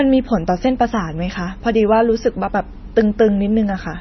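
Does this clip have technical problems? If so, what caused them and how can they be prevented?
Yes. The whole clip sounds watery, with nothing above 5.9 kHz, likely heavy MP3 compression at a bitrate near 24 kbps. Encoding at a higher bitrate would avoid it.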